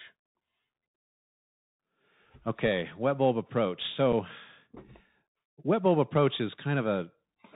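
From start to finish, the speech passes through a Bluetooth CVSD headset codec. Nothing above 4 kHz survives. The adaptive one-bit coder cannot track fast, loud high content, so sibilants turn scratchy. A grainy hiss sits underneath. This fits a 64 kbps link.

At 4.13 s, just after "wet bulb approach", unconcealed Bluetooth headset packet loss cuts a hole of about 7.5 ms, roughly one packet. The gap is left unfilled. Its edges are abrupt and can click. The speech resumes briefly quieter.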